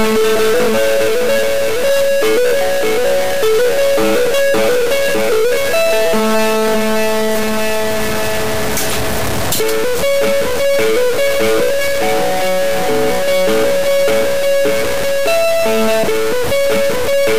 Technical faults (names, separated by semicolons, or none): stuck bit